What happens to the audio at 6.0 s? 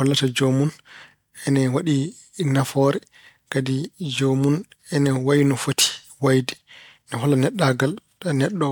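Nothing goes wrong at 6.0 s; the speech runs on intact there, with no dropout, click, distortion or other fault to be heard.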